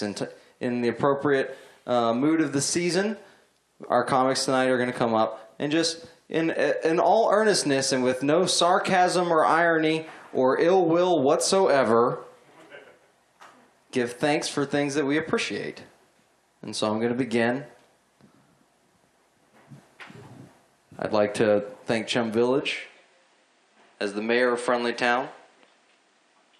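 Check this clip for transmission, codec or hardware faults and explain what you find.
One fault: at 22.61 s the sound abruptly loses its top end and stays that way to the end of the clip. This is likely an input switched to a poorer device, the recording path moving mid-stream to a lesser microphone or a headset's call profile. That device passes nothing above 9.6 kHz, so the audio turns duller. There is no gap at the switch and the level holds steady, but a faint new background noise appears, sitting well below the signal.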